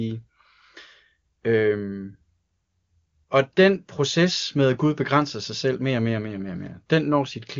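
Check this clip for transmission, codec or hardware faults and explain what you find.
No transmission, codec or hardware faults.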